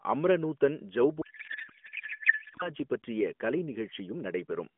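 From 1.22 to 2.69 s, between "அம்ர நூதன்" and "பற்றிய கலை", a codec payload misread turns the AMR speech into garbled warbling noise, as octet-aligned frames are decoded as bandwidth-efficient. It is continuous rather than dropout-like.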